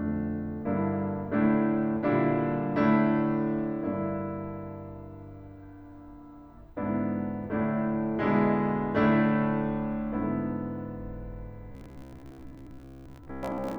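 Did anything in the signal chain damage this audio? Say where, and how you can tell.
Yes. The damage is at the driver or buffer stage. From 11.72 s to 13.78 s the music turns into robotic sound from repeated short buffers. A rigid, metallic buzz at 66.7 Hz sits over it. That pitch matches a block repeating every 15 ms. The likely cause is new audio arriving too seldom. The software fills each gap by replaying the last short block, and the real material is skipped. Most of that passage is repeats.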